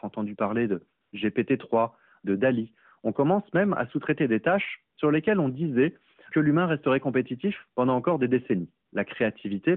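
AMR comfort noise appears at 1.02 to 1.12 s, 4.96 to 4.98 s and 8.86 to 8.92 s, gaps of 100, 20 and 60 ms. Each time, the sending phone judged the speech silent and stopped transmitting frames, and the receiver filled the hole with synthetic noise built from a rough level and spectrum. The real background briefly gives way to a smooth, even hiss that drops in and out, inside a narrowband line whose light coding suggests the 12.2 kbps mode.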